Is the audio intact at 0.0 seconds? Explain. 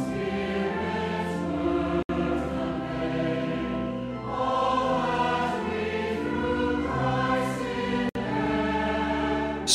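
Yes, the audio is intact at 0.0 seconds, with no fault present at that moment.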